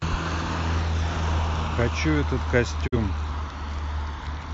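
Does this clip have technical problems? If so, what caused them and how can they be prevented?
Yes. A digital broadcast dropout occurs from 2.86 to 2.97 s. The speech fades to silence over about 20 ms and stays muted until decoding resumes, losing roughly 43 ms of programme. That span points to a single corrupted or missing frame: the receiver failed to decode it, muted rather than play garbage, and picked up again at the next good frame. Stronger reception, better antenna placement, or more robust error protection would prevent it.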